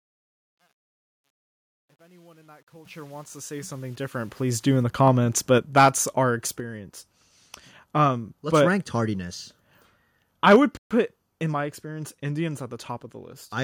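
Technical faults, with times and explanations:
0.00 to 4.83 s, truncation distortion on a fade: The speech fades in up to 4.83 s, just before "the comments". The low-level start is coarse, though. It is worst from 0.00 to 3.82 s. The fade gain is applied with too little precision and no dither, which fits a 10-bit path. Quiet samples snap to a few large steps. The waveform becomes square-edged. The sound turns gritty.
2.85 s, microphone volume stepped up: The level jumps by 8 dB in one step. The speech and the background noise rise together, with no ramp. This is the mark of an automatic gain control raising the device's input volume. The software judged the microphone too quiet and corrected it all at once. The jump lands inside the fade, so the rise there is uneven rather than gradual.
5.58 s, 6.60 s and 10.56 s, microphone volume stepped down: The level drops suddenly three times. The first is just after "the comments", by about 4 dB. 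The second, at 6.60 s, is also about 4 dB. The third, at 10.56 s, is about 3 dB. Speech and background fall together each time. The likely cause is the call software cutting the microphone's input volume after loud or clipped peaks. The drop at 10.56 s follows a distorted burst directly.
5.78 to 5.88 s and 10.47 to 10.56 s, microphone overload: The loudest syllables gain a harsh, crackling edge. The first burst is about 5 dB past the converter's limit, with a few percent of samples flattened. The second is about 4 dB over, with several percent flattened. The peak tops are sheared off at the converter's ceiling, and this adds raspy harmonics. The likely cause is input gain set too high, and the later burst prompts the cut at 10.56 s.
10.77 to 10.91 s, playback stall: The audio stops dead mid-flow for about 136 ms. It then resumes with "in my experience indians". This sounds like the player starving for data or its thread being held up. 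It likely ran out of buffered audio, went silent until it recovered, and then carried on.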